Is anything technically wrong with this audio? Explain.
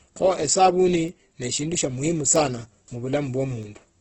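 Yes, two things. Throughout, the speech sounds rough and grainy, with heavy coding damage and nothing above about 8.2 kHz. That's likely Opus compression in its music mode at a very low rate, around 12 kbps, filling starved bands with noise instead of leaving gaps.

Then from 0.45 s to 3.63 s there are word clock ticks: about seven sharp clicks, roughly every 0.7 s. The receiving device's clock is drifting against the sender's by around 30 ppm, dropping or repeating a single sample at each slip.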